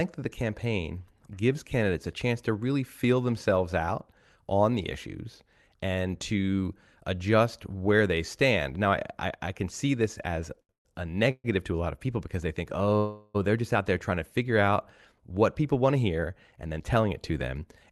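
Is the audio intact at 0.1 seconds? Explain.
Yes, the speech at 0.1 seconds is intact, with no fault at that moment.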